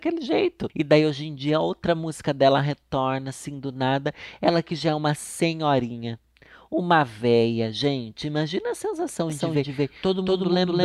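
At about 9.3 s a doubled audio track kicks in and runs to the end. A second copy of the speech, roughly as loud as the original, trails it by around a fifth of a second. It's likely a slower capture path recording the same signal twice. It starts abruptly, with no room colour.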